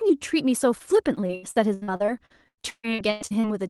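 A speech clip with repeated packet loss (robotic sound) from 1.15 to 3.45 s. Seventeen gaps arrive in quick succession, the longest 137 ms. Each is patched by stretching the last sound, so 37% of that stretch is concealed and sounds choppy and robotic. The call codec limits the band to 12 kHz.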